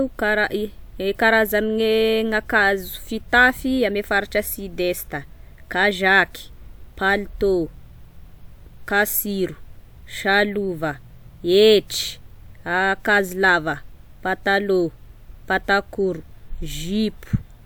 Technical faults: none

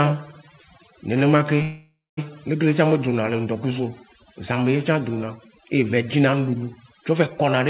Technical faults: overdone noise removal; call audio freeze

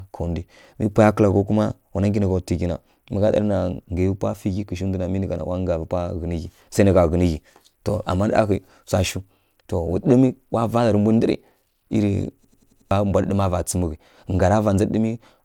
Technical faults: system hang loop

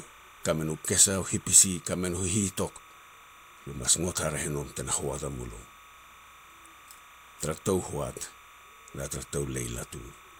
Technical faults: timecode bleed; corrupt frame decoded

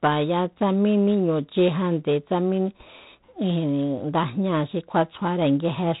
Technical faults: G.726 ADPCM

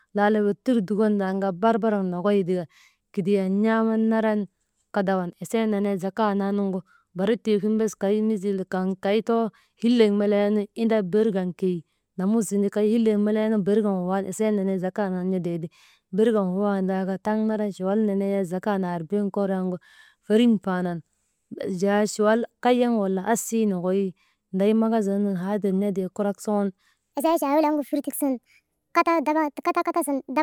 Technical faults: section at the wrong speed

